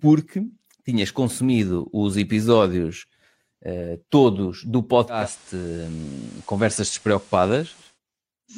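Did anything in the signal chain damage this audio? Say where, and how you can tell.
Yes, at the receiver: after "episódios uh todos do" at 5.08 s, digital radio blending to analogue FM brings in faint hiss until 7.99 s.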